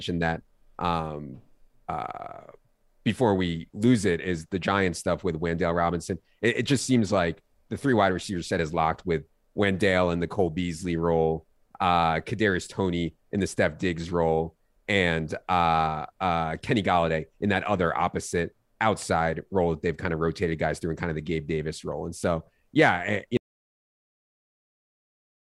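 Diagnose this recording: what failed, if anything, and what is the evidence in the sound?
Audio dropout to silence at 23.37 s after "so yeah eh you": plain silence, no room tone, to the end. Likely a dropped input link at capture.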